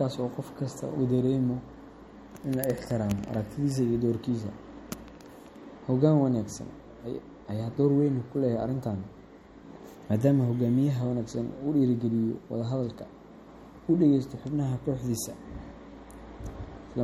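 A speech recording with compression damage that runs through the whole clip. The sound has a watery, swirling quality, and s sounds turn metallic and chirpy. Consonant attacks are smeared. Nothing is present above 16.7 kHz. The likely cause is MP3 compression at a low bitrate, near 48 kbps. Starved of bits, the encoder cut the treble at a fixed point. It also dropped weak frequency lines, which flicker on and off between frames.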